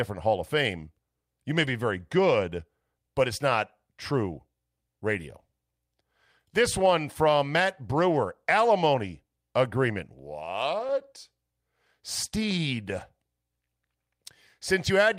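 At 1.63 to 1.69 s, between "you may" and "very good but it's", the speech turns briefly rough and grainy for about 40 ms. This is a lost packet rebuilt from error correction. The audio never drops out, which fits two separate 20 ms packets replaced by the low-bitrate copies carried in the packets that followed. On a spectrogram the harmonics blur into a smeared, noisier patch, but the waveform stays continuous with no gap. The same 40 ms coarse stretch recurs at 10.79 to 10.85 s, and a single 20 ms version appears at 13.01 s.

Just after the second of these, at 10.87 to 10.91 s, comes a short concealed packet loss. About 20 ms of audio arrived too late, and the decoder filled roughly 13 ms of it by extending the preceding sound before crossfading back into real audio. It is heard as a quick smear or wobble. On a spectrogram the energy runs on as a flat, copied-looking strip. On the waveform it appears as a continuation of the preceding sound with a blended seam at the end.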